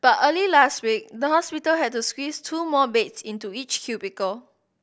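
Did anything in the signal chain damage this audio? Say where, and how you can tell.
No, nothing along the chain seems to have damaged this speech; I can't hear any point where a stage along the way has left its mark on the sound.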